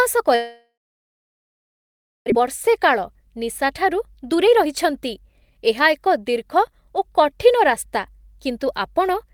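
From 0.35 s to 2.32 s the speech breaks off: a brief fading buzz carries the last sound, then about 1.5 s of silence, and speech resumes with roughly 1.4 s simply gone. This is likely a long network dropout, where packets stopped arriving and the receiver concealed the gap.

From 2.39 s to the end the speech runs about 5% fast, sounding slightly hurried while the pitch stays unchanged. This is a jitter buffer speed-up: after the backlog, the receiver trimmed short pitch-period slices repeatedly, shedding around 0.4 s of delay.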